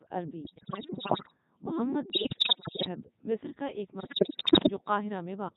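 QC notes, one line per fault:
Throughout: Codec 2 vocoder at 3.2 kbit/s, heavily damaging; voice resynthesised from sinusoids, buzzy and robotic, spectrogram shows clean harmonic combs, waveform shape not preserved.
0.44–1.37 s, 2.10–2.88 s, 4.00–4.70 s (third after "کا ایک"): bit errors on digital voice radio, roughly 7% then 15%; corrupted frame parameters cause pitch jumps, warbles, bleeps; spectrogram shows erratic harmonic steps, waveform level lurches.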